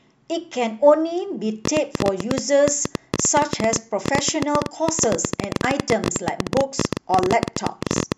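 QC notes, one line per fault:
1.65 to 8.13 s, train of clicks: A run of sharp ticks starts at 1.65 s and lasts to nearly the end of the clip. They arrive about 13 times per second at an uneven pace, around a hundred in all. Each is much alike in shape. They peak roughly 20 dB above the speech and stay audible in the pauses. The likely cause is interference from nearby equipment or a faulty connection or power supply injecting repeated pulses.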